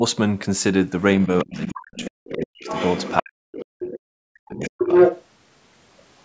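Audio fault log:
1.23–1.75 s, other side's voice leaking through: a faint second voice, about 15 dB under the talker, likely loudspeaker echo the echo canceller failed to remove.
1.26–2.66 s, speech suppressed in double talk: the talker dips deeply, around 40 dB, for about a second in pieces, likely the canceller ducking both voices during overlap.
1.97–2.09 s, 2.33–2.45 s, other side's voice leaking through: brief scraps of the far voice, about 15 dB and then about 25 dB down, likely residual echo.
2.64–3.15 s, other side's voice leaking through: a clearer far voice, only about 10 dB below the talker, likely echo passing the canceller.
3.22–4.93 s, speech suppressed in double talk: the talker drops out repeatedly, up to roughly 40 dB, for about one and a half seconds, likely overlap-triggered suppression.
3.83–3.99 s, other side's voice leaking through: a short far-end fragment about 10 dB down, likely residual loudspeaker echo.
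4.62–5.25 s, other side's voice leaking through: the far voice comes in slightly louder than the talker, likely echo the canceller let through.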